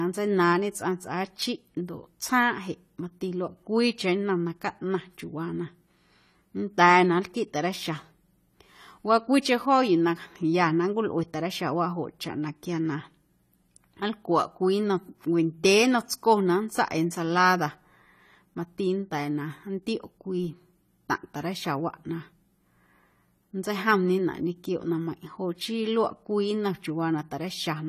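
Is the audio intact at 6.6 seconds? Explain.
No, at 6.6 seconds the speech carries damage that runs through the whole clip, likely from AAC compression at a low bitrate around 32 kbps. The coarsely quantised frames leave nothing above 14.1 kHz and a dull, smeared, fizzy texture on sibilants; a spectrogram shows a hard ceiling.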